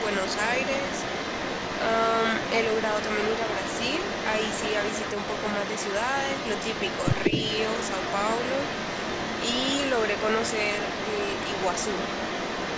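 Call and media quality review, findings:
Echo leak, 0.0–12.77 s: a delayed copy of the speech trails 185 ms behind, only a little quieter; likely a far-end loudspeaker echo canceller passing residue. A distinct repeat, not a smeared room-reverb tail.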